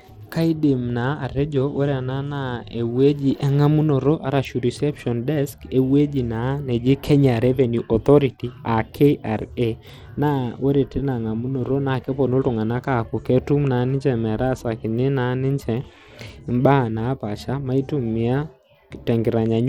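A speech recording carries Bluetooth SBC compression damage throughout, with treble flickering, gritty noise and aliasing. A spectrogram would show patchy, gapped upper bands, consistent with a likely low SBC bitrate near 96 kbps.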